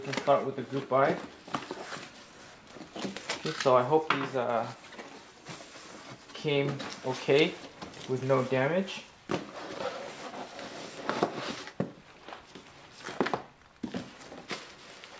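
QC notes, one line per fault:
No faults found; the audio carries the normal band limit of a call path, with nothing above 8 kHz, which fits a wideband codec such as G.722.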